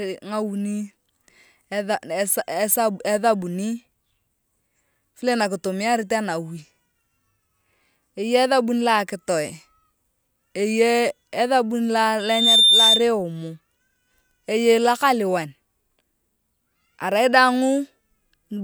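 At 12.19 s a loudspeaker feedback squeal kicks in: the mic's picking up its own speaker, and around 3.6 kHz the loop gain tops one, so a pure tone swells over about a third of a second, peaking a few dB above the speech until it drops out at 13.09 s.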